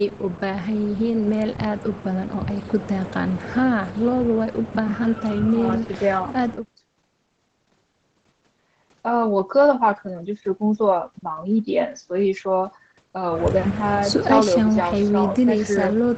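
No technical faults can be heard anywhere in the speech. The sound stops at 8 kHz, as expected from a call path whose codec is set to that bandwidth, and its coding texture fits Opus running at around 20 kbps.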